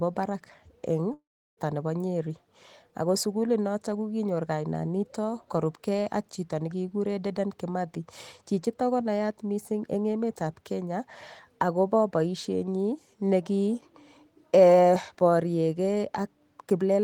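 At 1.13 s, after "barak eng'", the speech smears into a fading buzz, then silence until 1.59 s: likely a long network dropout, losing 0.44 s.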